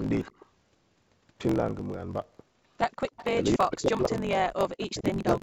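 A block size mismatch (truncated) runs through the whole clip. One stage writes longer blocks than the next reads, so each block's tail is discarded. The result is a steady buzz at 46.9 Hz, which fits 1024-sample reads, and speech running 1.12 times fast.

Echo leak first appears from 0.22 to 0.40 s. A faint copy of the speech, about 25 dB down, trails by 327 ms, likely because the far end's echo canceller let loudspeaker pickup through. It returns at 3.09 to 3.43 s, about 15 dB down.

Speech suppressed in double talk cuts in at 3.32 to 3.39 s and again from 3.56 to 4.22 s, with the speech dropping by roughly 40 dB. This is likely the canceller muting both talkers while unable to separate them.

Echo leak recurs at 3.99 to 4.18 s, very faint at about 35 dB down. It comes back at 4.78 to 4.87 s and at 5.18 to 5.34 s, about 20 dB down, always at the same 327 ms delay.

Speech suppressed in double talk returns from 4.88 s to the end, with the speech pulled down by up to roughly 40 dB.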